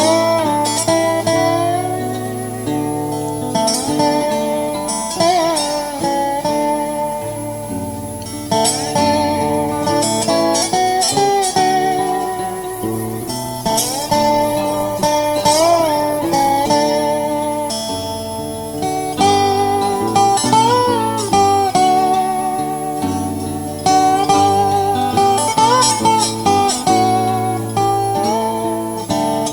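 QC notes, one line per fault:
12.74–16.75 s, call bitrate drop: bandwidth estimate collapsed, encoder fell from 64 to 16 kbps for nearly 4 s, so audio turns coarse, watery or muffled with highs cut.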